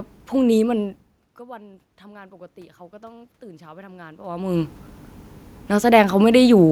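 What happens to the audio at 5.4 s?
Nothing goes wrong at 5.4 s: the speech there comes through intact, with only the background noise of the room underneath it.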